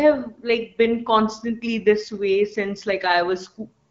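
No technical faults can be heard in this speech. The AMR wideband (HD Voice) codec path leaves only light coding character and a top end that stops near 7 kHz, which fits a rate of around 12.65 kbit/s.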